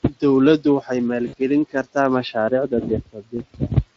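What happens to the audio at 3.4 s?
At about 3.37 to 3.42 s the speech briefly smears into a short stretched sound that fades. The gap sounds like roughly 20 ms, which points to a single lost frame. This is VoIP packet loss concealed by the speech codec: the decoder kept repeating its last pitch and filter at falling gain, and the voice stays thin for a moment after real audio resumes.

Around this dropout, from 3.06 to 3.71 s, parts of the speech sound swallowed and faint, dipping by up to about 15 dB and adding up to about a fifth of a second. This is speech cut by the noise suppressor, which mistook those quieter speech portions for background noise and turned them down.

Underneath all of this the voice has a hoarse, noisy, gritty texture. That is the Speex codec, whose damage is plainly audible here at a rate consistent with roughly 20 kbps. Too few bits describe the excitation.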